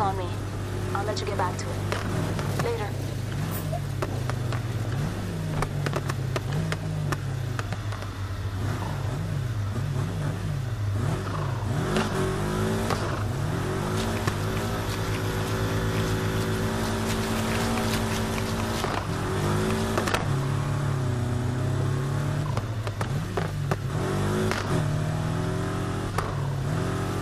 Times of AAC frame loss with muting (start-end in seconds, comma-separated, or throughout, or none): none